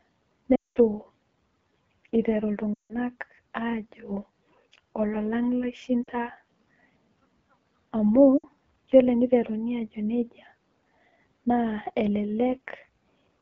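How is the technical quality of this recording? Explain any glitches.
Technical quality is poor: the whole recording has a rough, raspy coded sound, and four dropouts break up the speech.

Throughout the clip the speech sounds grainy and buzzy, with a hissy, artificial top end. This is the AMR wideband (HD Voice) codec at 8.85 kbit/s, one of its two lowest rates. At that rate the model of pulses driving a vocal tract filter has too few bits to follow the speech closely, so the damage is plainly audible. The band above 6.4 kHz is filled with shaped noise rather than real detail.

At 0.55 to 0.78 s and 2.73 to 2.95 s the speech drops to near silence within two frames, then returns weak and rough. Shorter dips come at 6.04 to 6.10 s and 8.38 to 8.45 s. These are lost AMR speech frames: radio errors corrupted frames, and the decoder filled the gaps by reusing the last good pitch and vocal tract settings at falling gain. 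The lengths of 200, 160, 40 and 60 ms point to runs of roughly ten, eight, two and three 20 ms frames.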